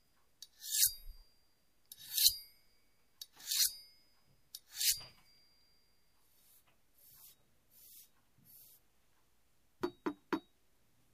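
Listening through the recording, nothing stood out as a technical fault at any point.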